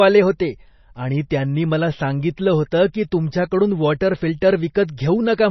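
Throughout the speech, heavy MP3 compression is audible: nothing above 5.9 kHz, with watery, swirling artefacts on s sounds, likely from a low-bitrate encode around 24 kbps.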